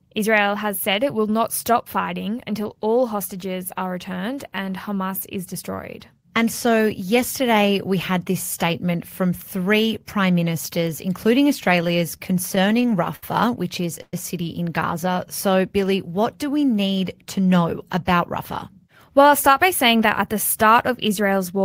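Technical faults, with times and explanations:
11.64–13.23 s, repeated stalls (stutter): after "three prime ministers including", eleven short gaps totalling 190 ms, the longest 67 ms, are bridged by prolonged sound until "which is a city". Packets arrived late, so playback drags.
14.02–14.14 s, call audio freeze: the sound is held as a decaying fill with about 40 ms of silence, then resumes. The likely cause is held-up packets emptying the jitter buffer.
17.00–18.20 s and 18.72–20.03 s, jitter buffer speed-up: after "what do we" and before "that at the", about 70 ms is trimmed from each span in pitch-period pieces, so the sound runs 5% and 4% faster at unchanged pitch.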